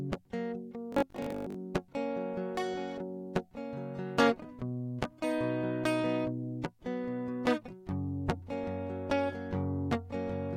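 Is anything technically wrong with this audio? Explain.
Yes. From 0.92 to 1.54 s the music turns into a robotic sound from repeated short buffers. A fixed, metallic buzz at 50 Hz sits over the sound. It follows the music only loosely. The likely cause is audio arriving too seldom, so the player keeps replaying its last fragment. A 50 Hz buzz fits a repeated piece about 20 ms long. Roughly half of the audio in that stretch is repetition, and the real material it replaced is skipped.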